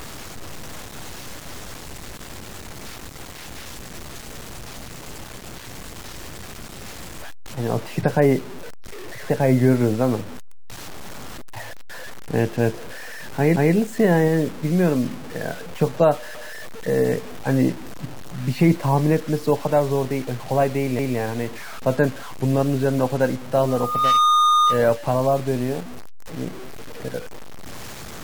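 Throughout the speech there is a gritty, grainy distortion that tracks the signal, with noise roughly 20 dB below it, likely low bit depth without dither from truncation to about 6 bits. At 13.56, 16.35 and 20.99 s, a 0.19 s stretch plays twice with a hard join each time. This is a repeated buffer: fresh audio arrived late, so the last block was replayed, which fits an 8192-sample buffer. From 23.68 to 24.89 s, a 1.2 kHz tone swells over roughly 0.4 s to about 5 dB above the speech. This is loudspeaker feedback squeal, where the microphone-to-speaker loop exceeded unity gain at that frequency.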